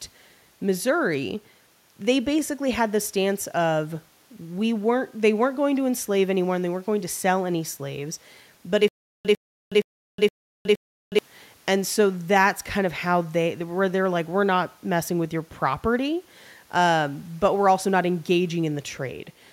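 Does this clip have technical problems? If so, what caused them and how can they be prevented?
Yes. From 8.88 s to 11.19 s the speech breaks into a stutter with silent gaps: a fragment about 102 ms long plays, then about 366 ms of digital silence follows, and this cycle repeats five times at a steady 468 ms period. This is likely a stalled player or stream that replays its last buffered fragment on each retry before running empty, so the speech due in that span is lost. Larger playback buffering and a more stable network or decode path would prevent it.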